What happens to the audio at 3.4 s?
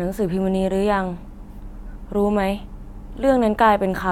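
At 3.4 s the audio plays through intact, with no dropout, click, distortion or other fault.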